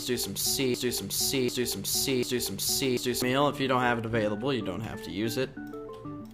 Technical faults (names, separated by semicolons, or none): broken-record loop